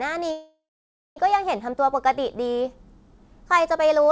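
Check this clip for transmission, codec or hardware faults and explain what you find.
There is one fault, a call audio freeze, from 0.32 s to 1.18 s. The likely cause is packets stalling in transit until the jitter buffer ran dry. The receiver then filled the gap by extending the last sound, which decays into about 0.55 s of silence. When the packets resume, the audio picks up where it stopped, with nothing lost. The clip now runs about 0.84 s later than it should. The band stops at 8 kHz, which fits a wideband call codec such as G.722.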